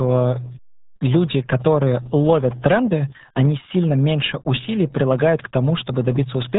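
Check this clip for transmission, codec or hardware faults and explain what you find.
There's one fault, and it runs the whole length: the RealAudio 14.4 codec. Everything above roughly 3.8 kHz is gone, and heavy coding damage makes the speech muffled and gargly. That fits the old 8 kbit/s dial-up speech coder, which squeezes the signal hard and discards the upper band.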